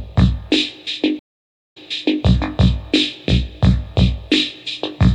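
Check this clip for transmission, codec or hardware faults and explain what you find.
One transmission fault stands out, a stream reconnect. At 1.19 s the sound drops to silence for about 0.57 s, then resumes roughly 0.47 s earlier than where it stopped, repeating material, through 2.23 s. The connection broke, and the player reconnected and started a fresh decoder mid-stream from a resent burst.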